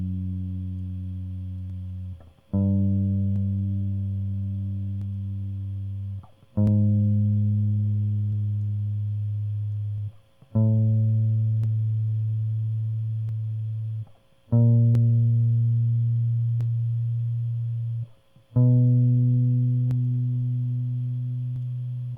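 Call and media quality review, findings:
Regular click/pop in the music every 1.66 s, about 15 of them from 1.70 s to 21.56 s. Likely clock drift buffer slips: two device clocks a few hundred ppm apart, so the buffer periodically drops or repeats a few dozen samples.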